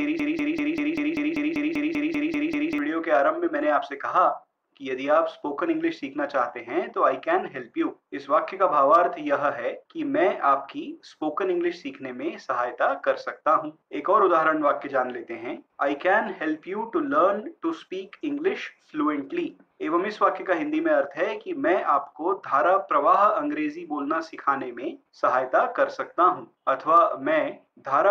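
A broken-record loop runs from the very start to 2.78 s, already under way when the clip opens. A 195 ms fragment repeats identically back to back about 13 times, likely because playback or the stream stalled and kept resending its last buffer, so the intended audio is lost.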